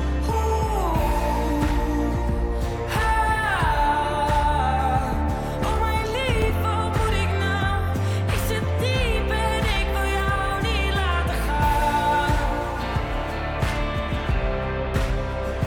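A loud pop at 6.42 to 6.52 s: two sharp thumps about 10 dB above the sound, likely a sudden voltage spike, with the audio carrying on underneath.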